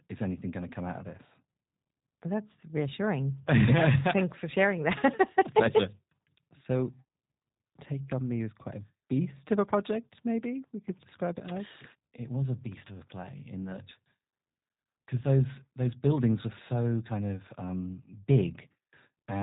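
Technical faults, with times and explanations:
Throughout, G.729 codec: the speech has plainly audible codec damage, with a slightly rough, synthetic texture and nothing above 3.8 kHz. The coder discards the waveform and resynthesises each 10 ms frame from a vocal tract filter, a pitch predictor and a few fixed pulses, so breathiness and fine detail are lost. The narrow band and coarse excitation fit a G.729A encode at 8 kbit/s, typical of VoIP telephony.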